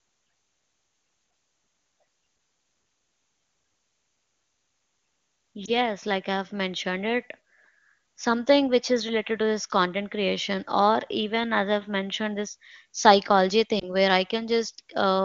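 At 5.65 to 5.71 s, just before "like I've mentioned it", and at 13.79 to 13.94 s, between "i've mentioned this psychology" and "where i", there are lost AMR speech frames. Each is a single missing 20 ms frame. The wideband decoder fills the gap by repeating its last good settings at falling gain. The result is a brief dip or warble, and the voice comes back weak or rough for a moment before the clear HD Voice sound returns.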